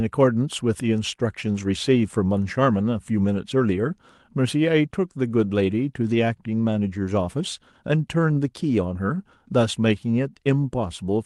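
No technical faults can be heard in this speech, which passes through a call codec whose audio band tops out around 12 kHz.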